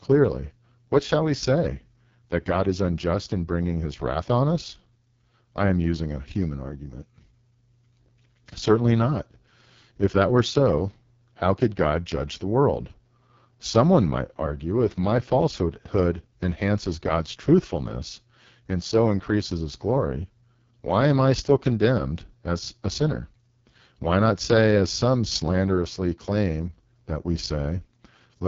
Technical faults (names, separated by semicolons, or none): AMR wideband (HD Voice) codec